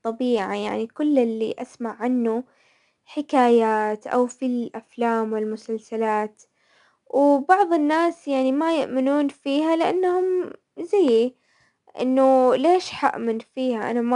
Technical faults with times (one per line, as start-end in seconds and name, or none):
0.00-14.15 4-bit ADPCM compression